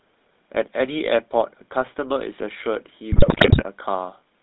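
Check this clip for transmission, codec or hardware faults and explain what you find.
Two faults are present: GSM full-rate codec coloration across the whole speech clip, and a burst of GSM bit errors near the end.

GSM full-rate codec, throughout: The speech carries the buzzy, gravelly roughness of the early GSM coder, which fits the 13 kbps full-rate scheme. It rebuilds the voice from a vocal-tract filter excited by a sparse, regular pulse train, so fine detail in the excitation is lost and replaced by a coarse, rasping texture. The damage is plainly audible. The band is held to about 150 Hz to 3.7 kHz, giving a thin, boxy telephone sound with no air above it.

GSM bit errors, 3.12 to 3.64 s: For about half a second the speech breaks into squawks, pops and gargling. Corrupted bits reached the decoder, and when filter, pitch or gain parameters are wrong the frame is rebuilt with a distorted spectrum or a sudden jump in level. 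The errors hit frame after frame, so the disturbance is a continuous stretch of mangled, lurching sound rather than a single click.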